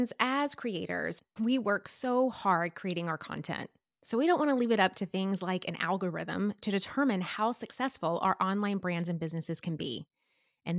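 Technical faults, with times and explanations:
No technical faults detected.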